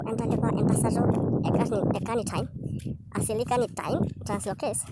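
From the first moment to the last, the speech runs fast and sounds chipmunk-high, a classic wrong sample rate. It's playing 1.5 times too fast and about 7 semitones sharp, which fits 16 kHz audio being played back at 24 kHz without any conversion.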